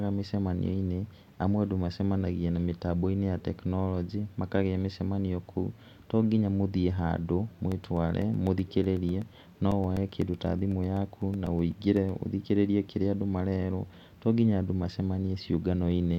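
A speech recording with periodic USB or driver dropouts from 7.59 to 12.09 s. Tiny gaps of about a millisecond drop to silence every 0.125 s, eight per second. They sound as a steady ticking over the speech. Something is stalling the audio path on a fixed schedule.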